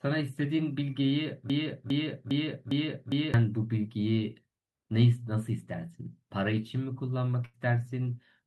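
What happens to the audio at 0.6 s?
Nothing goes wrong at 0.6 s; the speech is intact at that moment, with no audible fault.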